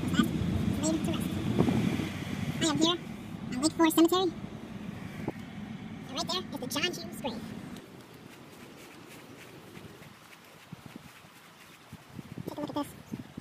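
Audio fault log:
Throughout: audio read two samples at a time (double speed). Each pair of consecutive samples is being treated as a single frame, as if the data held two channels or samples twice as wide. Playback therefore runs at 2x speed. Everything sits 12 semitones higher, a full octave up.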